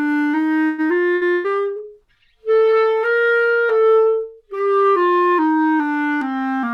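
At 0.67 s the sound stalls until about 0.96 s. This is a call audio freeze, likely caused by packets held up in transit so the jitter buffer ran dry. The receiver stretched the last sound for about 110 ms, and it buzzes or hisses and fades rather than falling silent. Nothing is lost. The audio picks up where it stopped, just later. That leaves the rest of the clip running about 110 ms behind.

Two bursts of packet loss follow. The first runs from 1.15 to 1.24 s. The second runs from 1.33 to 1.47 s. In each, a run of packets never arrived in time. The receiver filled the hole with a fading continuation of the last sound, about 60 ms in the first and about 110 ms in the second. Then the audio jumps ahead. About 60 ms and 120 ms of material are simply gone.

From 1.40 s to 3.68 s there is a call bitrate drop. The estimated bandwidth fell, and the encoder went from 128 kbps to 28 kbps. It held that low rate for about 2.2 s. 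At 28 kbps the coding gets coarse, and the top end is trimmed. The sound turns dull and watery across that stretch. Full quality returns after 3.68 s.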